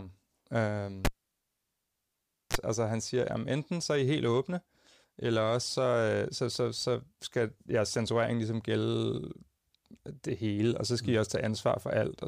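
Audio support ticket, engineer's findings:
Cable pulled and plugged in, 1.05–2.57 s: pop, then 1.47 s near silence, brief 60 Hz mains buzz (34 ms) as tip-only contact, second pop on return. Pops and hum burst separate it from a plain dropout. Live cable pulled and reinserted.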